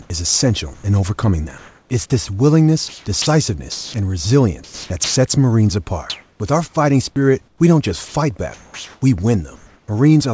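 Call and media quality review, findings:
Comfort noise in place of the background: room tone turns to steady, featureless hiss at 0.02–0.10, 1.58–1.90, 6.10–6.40 (about 15 dB louder) and 9.56–9.88 s. Likely sender discontinuous transmission, receiver synthesising the background.

Sound dropped by the voice detector: 0.74–0.84 s, about 50 ms of speech gives way to steady noise. Likely sender VAD misreading speech as background and halting transmission.

Sound chopped by the voice detector: choppy speech at 2.88–3.94, 4.64–5.16 and 7.48–9.02 s. Likely VAD toggling send/no-send repeatedly, comfort noise filling the gaps.

Nothing audible above 8 kHz, consistent with a G.722 call path.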